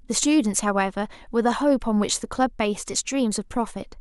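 No technical faults are audible.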